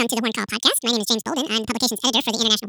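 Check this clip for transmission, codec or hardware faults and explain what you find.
The speech is being read two samples at a time (double speed) for its whole length. The reader takes each pair of consecutive samples as a single frame, as if the stream held two channels or samples twice as wide, so two input samples are consumed per output sample. Playback runs at 2x speed and the pitch rises 12 semitones, a full octave, giving a chipmunk-like rush.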